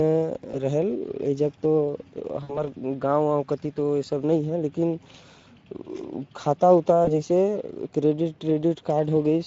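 The whole clip runs through the Speex codec, and at this setting the damage is plainly audible: the speech sounds noisy and hoarse because too few bits go to the excitation, with the top band above 4 kHz reduced to a shaped, hissy fill.

Then there's VoIP packet loss concealed by the speech codec, at 0.51 to 0.55 s, 2.43 to 2.68 s and 7.05 to 7.11 s. The decoder stretches its last pitch and filter into a buzzy tone or a coloured noise that fades, and after the middle gap, about 60 ms of lost audio, the voice stays weak or distorted for tens of milliseconds or more before it recovers.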